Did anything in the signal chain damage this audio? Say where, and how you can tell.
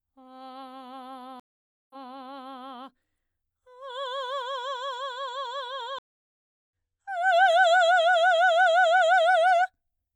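Yes. The music cuts to complete silence twice: at 1.40 s for 0.50 s, and at 5.99 s for 0.72 s. Each time it resumes further along rather than where it stopped, skipping roughly half a second of material the first time and roughly 0.7 s the second. This is a stream reconnect at the network stage. The connection dropped, the player went quiet, reconnected to the stream and restarted its decoder mid-stream, so the missing audio is skipped rather than delayed.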